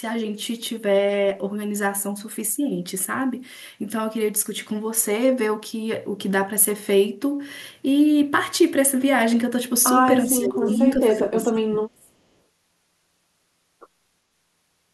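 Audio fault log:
10.26–10.68 s and 10.96–12.14 s, speech suppressed in double talk: the speech dips twice, first by around 20 dB for a bit under half a second, then harder, by about 30 dB, for roughly a second. The likely cause is the other side talking at the same time, with the echo canceller unable to tell this talker apart from its own loudspeaker echo, so it pulled everything down together.
11.11–11.19 s, echo leak: a brief, faint copy of the speech slips through, arriving 384 ms late and sitting about 30 dB below the live speech. It lands inside the second suppressed stretch, so it's just a short scrap. The likely explanation is that the far end is on a loudspeaker and its echo canceller didn't fully strip what its microphone picked up, so that remainder got sent back.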